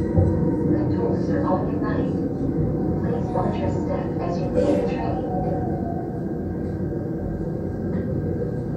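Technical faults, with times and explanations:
No technical faults can be heard, and the signal is intact and continuous across the whole recording.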